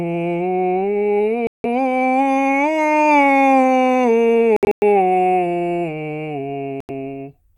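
Audio packets likely failed to reach the headphones in time and were discarded, a Bluetooth dropout, so the music cuts to silence and resumes further along, as if it kept playing. The first hole runs from 1.47 to 1.66 s, about 170 ms. At 4.56 to 4.83 s the losses are broken up, 192 ms gone across 256 ms, the longest gap about 107 ms. The last gap falls at 6.80 to 6.90 s, about 85 ms.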